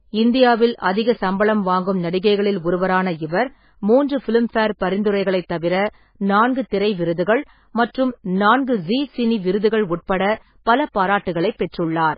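From start to end the speech carries heavy MP3 compression damage: nothing reaches above 5 kHz, so sibilants sound dull, while weak frequency lines flicker in and out between frames, giving a watery, swirly texture and smeared onsets. This likely comes from encoding at a very low bitrate, around 16 kbps.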